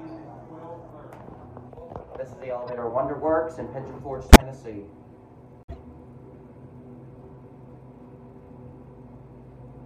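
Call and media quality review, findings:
Brief chirp/noise bursts at 2.67–2.73 s, 4.29–4.42 s (loud, near full scale) and 5.63–5.74 s (quiet, about -25 to -30 dBFS, like the first). Decoder: corrupt frame decoded. Bit-flipped frames played anyway, misread gains and codes putting energy at wrong frequencies over a handful of frames each.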